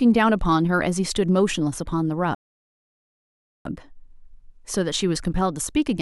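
At 2.35 s the speech just drops out into silence and sits there until 3.65 s, which is a classic rebuffering stall. The player burned through everything it had downloaded and had to wait for more data before carrying on. When it picks back up, it resumes right where it left off, so nothing's missing. You just get about 1.3 s of dead air added, which makes the delivery feel like it froze mid-flow.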